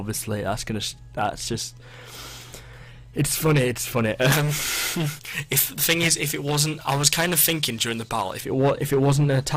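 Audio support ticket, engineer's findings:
Pre-emphasis left on, 4.32 to 8.40 s. Treble lift of about 11 dB at 10 kHz relative to 1 kHz, consistent with a J.17 curve. Thin, bright, sibilant audio. Probable cause: encoder-side emphasis with no matching de-emphasis at decode.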